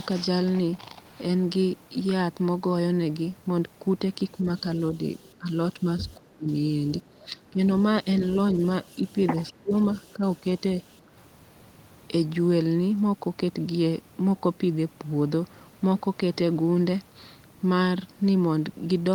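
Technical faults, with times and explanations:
4.42–6.52 s, 7.09–8.06 s and 8.95–10.63 s: speech suppressed in double talk. Within each span the speech dips, about 0.7 s in total in the first span and about 0.4 s in each of the others. The deepest drop is about 30 dB in the first span and about 20 dB in the later two. The likely cause is an echo canceller that heard both sides talking at once, could not separate the near talker from the loudspeaker echo, and attenuated both.
4.81–5.23 s, 6.09–6.14 s, 7.78–9.15 s and 9.96–10.6 s: echo leak. A copy of the speech returns 210 ms late. It sits about 40 dB below the speech in the first two scraps, about 25 dB below from 7.78 s, where it is most audible, and about 35 dB below in the last span. These are likely residues of a loudspeaker-to-microphone path that the far side's echo canceller did not fully remove, so they were sent back into the call.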